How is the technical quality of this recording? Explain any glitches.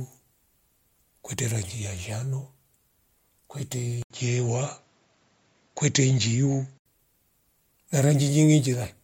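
The speech has one glitch: an input switched to a poorer device. From 4.02 to 6.86 s, after an 80 ms gap, the sound dulls with nothing above 7.6 kHz. Faint new background noise sits roughly 45 dB down, at the same level. A likely switch to a narrower-band microphone.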